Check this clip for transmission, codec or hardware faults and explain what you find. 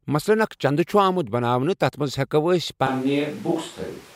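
One fault appears: a switch to a distant microphone at 2.87 s, lasting to the end. The speech turns abruptly roomy and hollow, with thinner bass but little change in level. Background noise rises to roughly 25 dB below the speech. The likely cause is that the close microphone dropped out and a farther one took over. On a spectrogram, low-frequency energy weakens, reverberant tails smear between syllables, and the noise floor visibly lifts.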